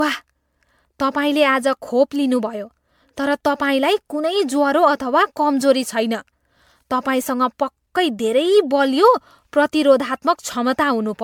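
The speech sounds swirly, hollow and smeared throughout, with blurred attacks. A spectrogram shows spectral holes and nothing above 19.8 kHz, likely generation loss from roughly fifteen MP3 passes.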